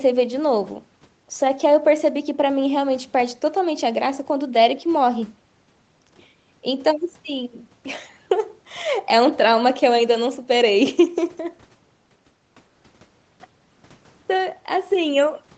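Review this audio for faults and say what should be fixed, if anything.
Nothing in this audio needs to be fixed, as no faults can be heard.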